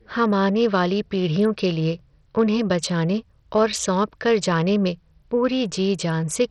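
From start to finish, the speech carries heavy codec damage. Nothing is heard above about 13.6 kHz. The treble that remains below that is unstable and flickers in and out. A gritty, grainy noise rides on the voice, with aliasing. This points to Bluetooth SBC compression, likely at a starved setting near 64 kbps. With so few bits, the weak upper sub-bands get almost nothing. The rest are quantised coarsely.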